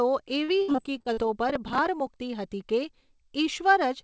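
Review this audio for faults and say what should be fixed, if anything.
From 0.44 to 1.19 s the speech breaks up with repeated packet loss, giving a choppy, robotic quality. Seven holes fall in this stretch, the longest about 62 ms. Each is bridged by stretching the last sound, so roughly a third of the span is concealment rather than real audio. Because the gaps arrive back to back, the repeated fill sounds choppy and syllables lose pieces. Prevention: give the jitter buffer more depth and add forward error correction or retransmission on the link.

From 1.50 to 2.07 s a burst of processor overload crackle rides on the speech. The processing missed its deadline on many short buffers, about 15, which fits buffers of a few milliseconds each. Each missed buffer was skipped outright, leaving a tiny hard-edged gap, and the run of gaps reads as gritty tearing that stops once the load drops. 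The call path's coding, with nothing above 8 kHz, sits underneath this. Prevention: raise the audio thread's priority or enlarge the buffer so peak load fits within each deadline.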